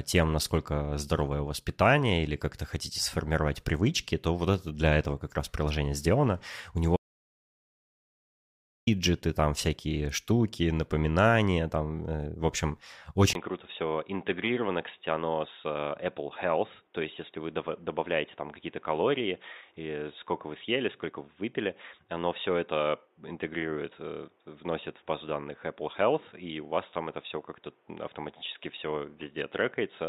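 At 6.96 s the speech drops out to silence, with no room tone at all, for about 1.9 s until 8.87 s, picking up on "там всякие штуки напоминания". That's an audio dropout to silence, likely the input going away while the recorder kept writing silence.

Then at 13.33 s, right after "там э в общем", there's a 20 ms gap and the input switches to a poorer device, likely another mic or a headset call profile. Everything above 3.8 kHz is gone, so the speech goes dull and boxy, about 5 dB quieter, with a new noise floor roughly 40 dB down, and it stays that way to the end.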